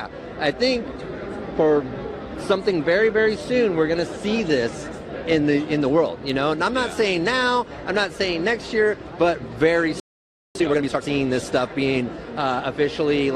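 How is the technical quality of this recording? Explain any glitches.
The recording suffers one interruption in playback, followed by a brief hurried passage as it recovers.

At 10.00 s the audio drops out abruptly and stays silent until 10.55 s, a gap of about 0.55 s in mid-flow. This is a playback stall, likely caused by the player running short of buffered data or its thread being held up.

From 10.55 s to 11.09 s the sound rushes forward at twice normal speed, yet its pitch is unchanged. That is time-compressed catch-up: the player trims small slices from its backlog and cross-fades the joins to regain lost time.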